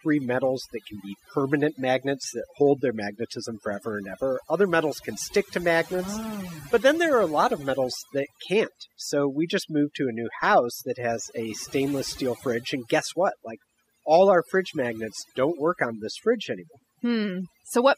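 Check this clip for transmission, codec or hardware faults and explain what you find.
Overdone noise removal runs through the whole speech clip. A noise reduction stage was set too hard. It pulls down individual frequency bands it mistakes for noise, taking quiet parts of speech with them. In pauses the background drops and breaks into twinkling specks.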